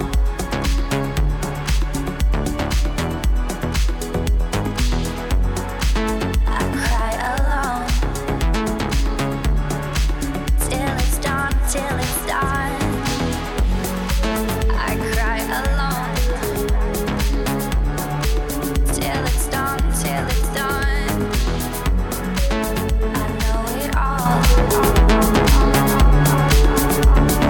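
At 24.26 s there's a sudden gain jump: everything, background noise included, steps up about 6 dB and stays there, likely a gain change applied without any ramp.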